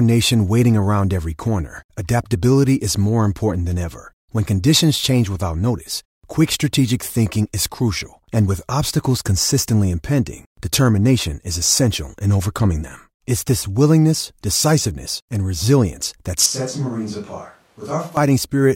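At 16.46 s, right after "decisiveness and resilience that", the sound abruptly turns hollow and roomy until 18.17 s. The likely cause is a switch to a distant microphone after the close one dropped out. The level falls by about 10 dB, the bass thins, and room noise rises to roughly 30 dB below the speech. Unlike a plain gain drop, the tone and room character change too. Unlike added reverb, the onset and return are instant cuts.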